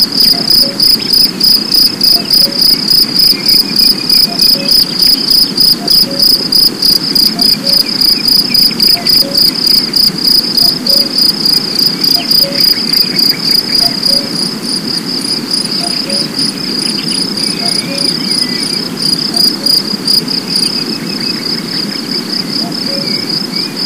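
From start to finish the audio suffers hard clipping: the signal is driven about 14 dB past what a stage in the chain can pass, so every peak is sliced flat and roughly a tenth of the waveform sits pinned at the limit. Those square tops throw harsh harmonics high into the spectrum, giving loud sounds a buzzy, crackling fuzz. Unlike soft saturation, which rounds peaks gently, the edge here is abrupt and gritty.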